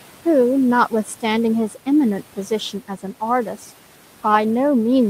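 Speech with noise suppressor artifacts throughout: background noise drops by about 12 dB between phrases and swells back under each word. Unlike a hard noise gate, the sound never cuts to silence. The room noise sits about 19 dB below the speech.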